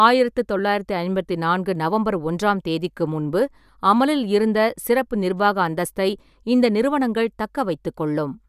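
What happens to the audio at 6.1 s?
Nothing goes wrong at 6.1 s; the speech runs through that moment intact, with no dropout, click or distortion.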